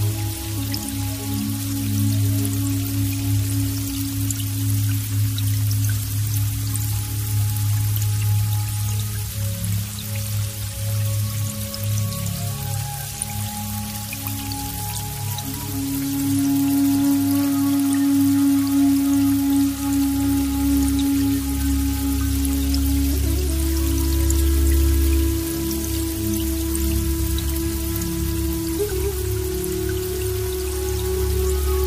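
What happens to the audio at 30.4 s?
Nothing goes wrong at 30.4 s: the audio plays through that moment intact, with no audible fault.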